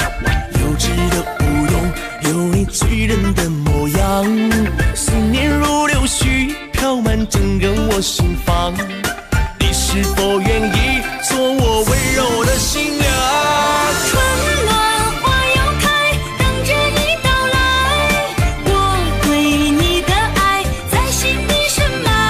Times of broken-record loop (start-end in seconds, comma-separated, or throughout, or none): none